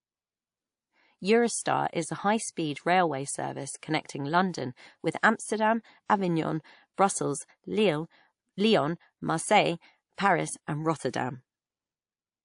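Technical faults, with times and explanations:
Throughout, transcoding between lossy codecs: the speech has nothing above 10.6 kHz, with artefacts from a low-bitrate first encode overlaid by a second codec's own, so two sets of artefacts sound at once. The likely cause is a chain of two codecs, which fits an MP3 near 40 kbit/s re-encoded to WMA near 96 kbit/s. The higher second bitrate cannot restore what the first pass discarded, so its 10.6 kHz ceiling remains, and the later codec spends bits reproducing the earlier damage.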